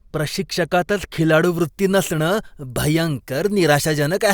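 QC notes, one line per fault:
1.44–4.33 s, pre-emphasis left on: the matching de-emphasis cut is missing after a CD 50/15 µs-style treble boost, leaving about 8 dB extra at 10 kHz, so speech sounds thin, bright and sibilant.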